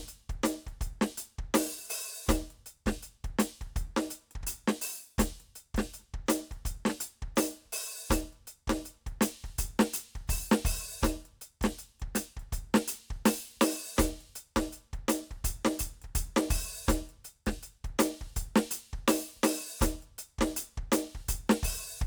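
Listening to this music recording, nothing technically wrong stood out.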